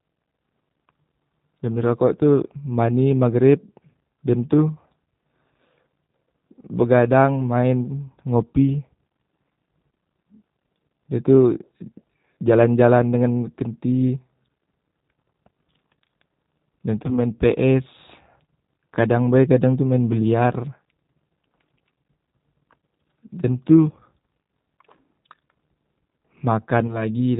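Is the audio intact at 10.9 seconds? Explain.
No, not really. At 10.9 seconds, like everywhere else in the clip, the speech carries plainly audible G.729 codec damage, and the sound fits that 8 kbit/s VoIP codec. It rebuilds speech from a vocal tract model, a pitch predictor and a handful of pulses per 10 ms frame, and drops everything above 4 kHz. So the voice sounds muffled, slightly rough and synthetic rather than natural, though it stays intelligible.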